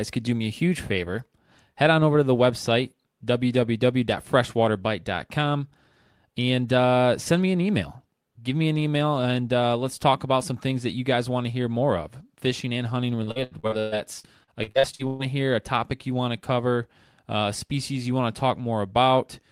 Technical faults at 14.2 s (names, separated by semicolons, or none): repeated packet loss (robotic sound)